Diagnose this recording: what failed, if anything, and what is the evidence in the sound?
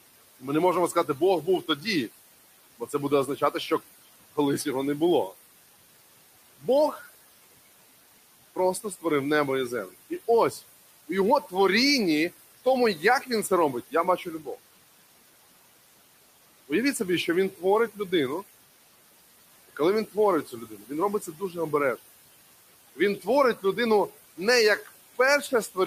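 The call-processing noise suppressor is working too hard on its input. Its gain per band follows what it judges to be steady noise, pulling the room noise (about 18 dB under the speech) down by about 17 dB in the gaps and releasing it under speech. The result is noise suppressor artifacts across the whole clip: the background pumps in and out with each phrase.

The same suppressor also mistakes parts of the speech for noise. These are speech cuts by the noise suppressor, at 0.41–1.86 s, 2.8–4.66 s (before "його не було"), 8.56–9.04 s (before "небо і землю"), 12.65–14.58 s (after "у його творінні в"), 16.69–18.12 s, 19.69–21.55 s and 22.96–25.77 s. Within each window, brief stretches totalling about a tenth to three tenths of a second drop by about 10 to 14 dB, so soft consonants and word endings sound swallowed.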